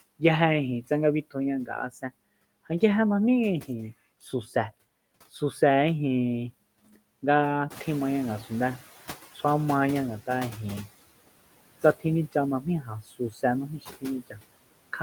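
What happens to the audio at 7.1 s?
At 7.1 s, noise suppressor artifacts are present, as they are throughout the clip. The suppressor judges which frequency bands hold steady noise and pulls them down frame by frame, by about 20 dB. The background therefore ducks in pauses and swells back under the speech. On a spectrogram, the noise floor shows dark gaps between phrases. The waveform's floor flattens between utterances. Shortly after this moment, around seven and a half seconds, the room noise itself rises by about 11 dB and settles about 17 dB below the speech, which gives the suppressor more to chew on.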